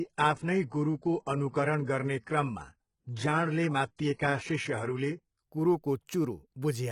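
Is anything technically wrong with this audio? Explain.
Yes, there is one fault. Adaptive stream starting at a low bitrate, from 0.00 to 5.42 s: the player began on a lean version of the stream, which sounds like roughly 12 kbit/s HE-AAC, then stepped up to what fits 96 kbit/s AAC-LC. Until the switch, the speech has no real content above 11 kHz and heavier codec artefacts. At 5.42 s the quality jumps abruptly, with no gap.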